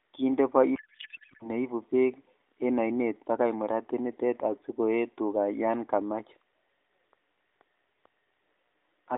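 From 0.76 to 1.51 s, a codec payload misread turns the speech into garbled noise and warble. Octet-aligned AMR frames are read as bandwidth-efficient, scrambling every field. Normal speech returns with "neibu bek en ainet".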